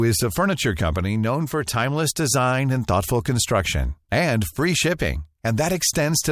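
No technical faults are audible anywhere in the speech recording.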